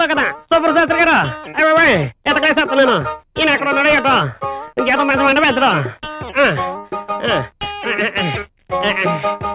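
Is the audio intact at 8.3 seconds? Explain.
Yes, the audio at 8.3 seconds is intact, with no dropout, click, distortion or other fault at that point.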